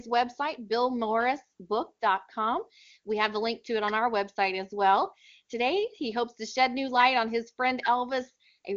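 No faults are present in the speech, which carries the AMR wideband (HD Voice) codec at a quality consistent with its top 23.85 kbit/s mode, where any coding damage is faint at most.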